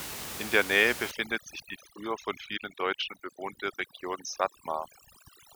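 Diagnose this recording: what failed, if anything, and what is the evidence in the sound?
Overdone noise removal in the call-processing stage degrades the speech from 1.11 s to the end at 5.56 s. Room noise sits only about 10 dB below the speech, and the suppressor is set so hard that it drives any band near its noise estimate down or off, taking the quieter speech components with it. The background drops to near silence flecked with twinkling specks. A spectrogram shows a near-black floor dotted with isolated flickering bins and ragged holes eaten into the speech harmonics.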